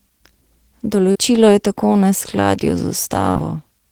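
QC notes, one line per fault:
1.11–1.18 s: short concealed packet loss. About 40 ms of audio never arrived in time. The receiver extended the preceding sound for roughly 36 ms, then blended back into the real signal. This is heard as a brief smear in the speech.
3.31–3.38 s: short concealed packet loss. Another 40 ms gap was patched with about 42 ms of continued sound before rejoining the real audio. It gives a quick wobble where the original detail is gone.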